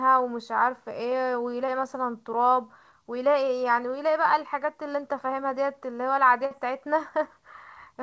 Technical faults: short concealed packet loss; burst of packet loss

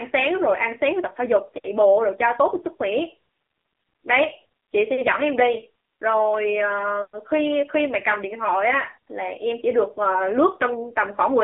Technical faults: AMR narrowband mobile codec

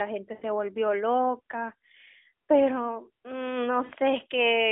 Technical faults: lost AMR speech frames

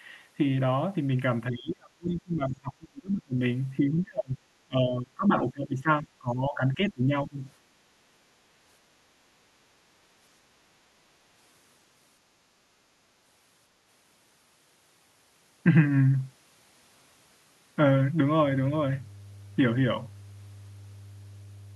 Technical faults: speech suppressed in double talk; mains hum

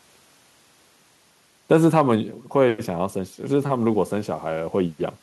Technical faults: none

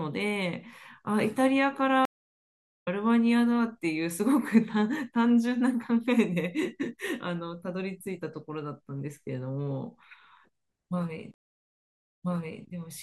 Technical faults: stream reconnect

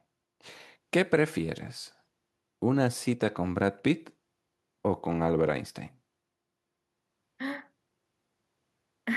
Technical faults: none

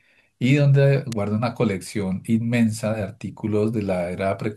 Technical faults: electrical switching spike

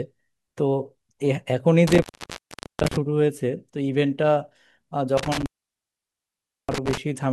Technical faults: intermittent contact

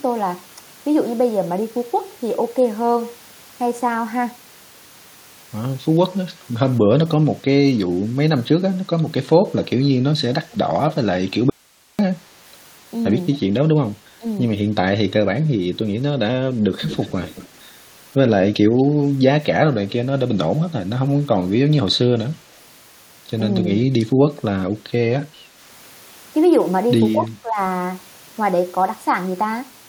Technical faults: echo leak; audio dropout to a faint residue; speech suppressed in double talk

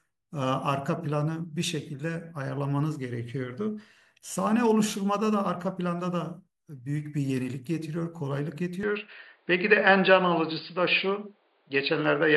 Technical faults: input switched to a poorer device

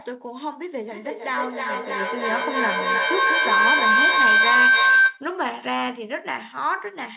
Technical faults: feedback howl

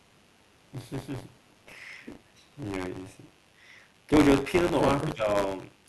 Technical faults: mains buzz; buffer tearing; speech suppressed in double talk

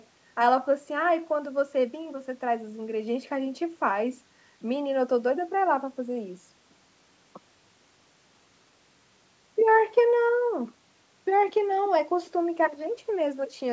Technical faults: none

